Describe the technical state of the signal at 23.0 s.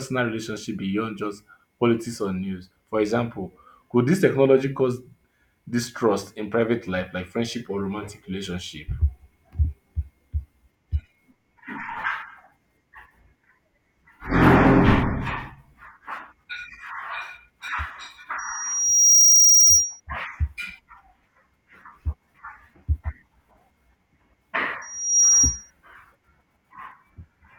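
At 23.0 s the speech signal is intact, with no fault present at that moment.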